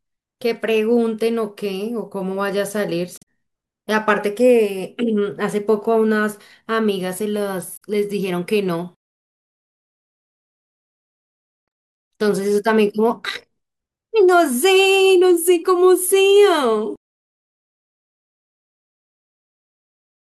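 Damaged data in a compressed stream appears at 3.18 to 3.23 s and again at 7.73 to 7.82 s. Corrupted bytes make the decoder misread those frames and lose sync while hunting for the next frame header, giving a brief chirp or blip each time.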